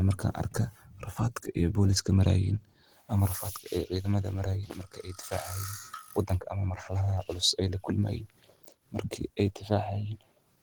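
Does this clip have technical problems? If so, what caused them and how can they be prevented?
Yes. Opus compression runs throughout: the speech sounds plainly muffled, hoarse and grainy, though it still extends up to 20.1 kHz. The likely cause is Opus in its hybrid speech mode at a low rate, which fits 16 kbps, where scarce bits force coarse, noisy band filling. Encoding at a higher bitrate, such as 32 kbps or more, would prevent it.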